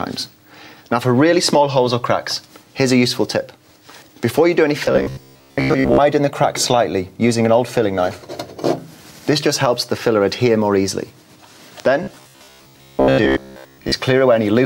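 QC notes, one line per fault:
4.86–6.00 s and 12.03–13.92 s, robotic sound from repeated short buffers: both stretches turn into a stiff, metallic buzz pitched at about 66.7 Hz while the sound underneath still roughly tracks along. That pitch corresponds to a chunk about 15 ms long being replayed over and over, so this is likely buffer starvation. New audio isn't arriving in time and the last block gets looped, which skips most of the real material in those windows.
11.8 s, loud pop: a single sharp click lands on top of the audio and pokes out a few dB above the surrounding level, with the sound carrying on underneath. It's a brief, isolated transient rather than anything sustained, so the likely cause is a sudden voltage step or glitch somewhere in the chain, such as a connector, a switch, static, or a driver hiccup, getting shaped into that quick pop.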